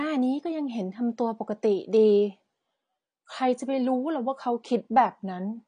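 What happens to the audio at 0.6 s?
At 0.6 s you're hearing the same thing that runs through the whole clip: likely AAC compression at a low rate, around 32 kbps by the sound. Nothing survives above 9.6 kHz, so the speech sounds dull and smeared, with a fizzy, warbling edge on sibilants.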